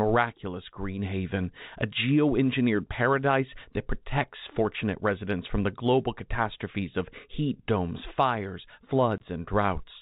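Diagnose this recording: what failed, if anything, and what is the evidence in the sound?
A brief hole opens in the audio from 9.18 to 9.20 s, just after "of heat domes fires": the sound drops abruptly to silence for 20 ms. This is packet loss filled with silence, a network-stage fault. The gap's length points to a single lost 20 ms packet that the receiver replaced with silence instead of concealing it. The G.711 telephone coding, limited to the band below 4 kHz, carries the surrounding audio.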